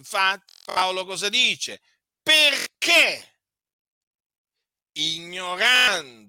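Bluetooth stutter at 0.49 to 0.82 s, 2.59 to 2.66 s and 5.76 to 5.88 s. Missing packets made the receiver replay its last short slice as a buzzing repeat, and then the speech jumps ahead.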